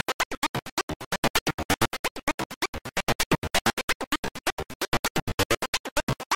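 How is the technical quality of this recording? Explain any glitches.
Nothing in the recording stood out as a technical problem on listening, so there are no glitches to explain.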